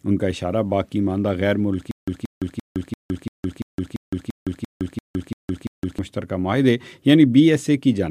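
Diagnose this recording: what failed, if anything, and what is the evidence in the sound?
Stutter with silent gaps from 1.91 to 5.99 s: a 179 ms burst repeats twelve times every 342 ms, separated by 163 ms of digital silence, likely a stalled playback stream replaying its last fragment.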